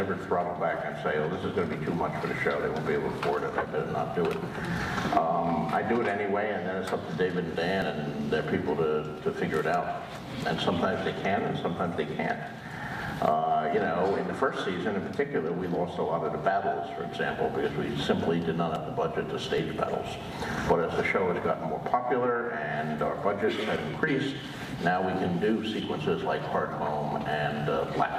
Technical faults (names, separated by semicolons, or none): dropped buffer (overrun)